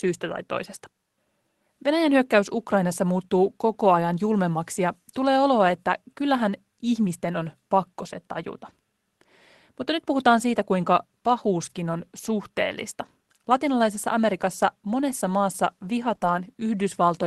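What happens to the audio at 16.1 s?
From 16.11 to 16.13 s one packet was lost and rebuilt from error correction: the decoder played a low-bitrate copy from the next packet, so there is no gap, but that 20 ms sounds rougher and noisier. Short concealed packet loss follows at 16.15–16.19 s and 16.19–16.23 s. The receiver extended the preceding sound to fill each hole, then blended back, leaving a brief smear or wobble through the Opus call path.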